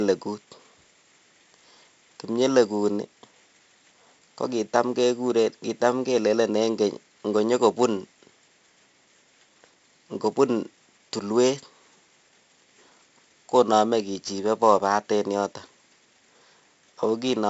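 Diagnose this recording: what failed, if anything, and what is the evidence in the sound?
The codec stage failed: 4-bit ADPCM compression throughout the speech. A gritty hiss rides every loud syllable and drops away in pauses, and attacks crunch where the step size lags. Nothing above 7.7 kHz fits a 16 kHz rate at 64 kbps. Unlike steady background hiss, this noise follows the signal level.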